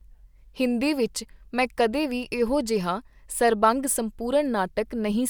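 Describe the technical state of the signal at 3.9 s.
At 3.9 s the speech signal is intact, with no audible technical fault at that moment.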